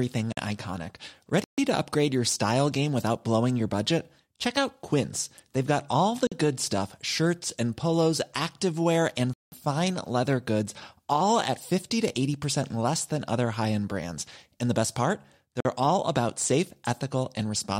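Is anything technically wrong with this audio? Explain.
Yes. The speech drops out abruptly five times: short holes of about 46 ms at 0.33, 6.27 and 15.60 s, and longer ones of 139 ms at 1.44 s and 186 ms at 9.33 s. This is a block of digital silence: the output buffer likely wasn't filled in time, so zeros were played with no fade. The repeated 46 ms length fits a 2048-sample block, and the longest gap fits an 8192-sample one.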